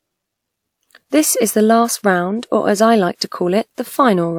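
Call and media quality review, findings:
Pre-echo at 1.10–1.12 s and 3.15–3.21 s: soft hiss smeared ahead of speech onsets, spreading about 29 ms and 59 ms. Transform codec block quantisation noise leaking before sharp attacks.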